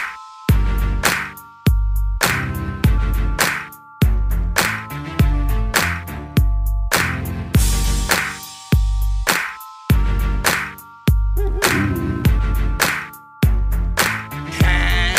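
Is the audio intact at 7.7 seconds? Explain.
Yes, the audio is intact at 7.7 seconds, with no dropout, click, distortion or other fault audible at that moment.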